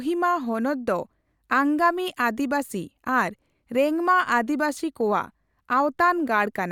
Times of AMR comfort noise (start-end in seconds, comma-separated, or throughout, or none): none